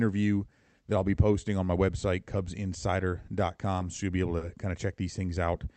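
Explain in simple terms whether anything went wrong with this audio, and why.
Yes, there are two short stalls from a late packet, at 3.96 to 4.00 s and 4.38 to 4.43 s. The data arrived late, so the receiver held the last sound for about 20 ms and then 30 ms before continuing. Nothing is lost, but the speech briefly drags.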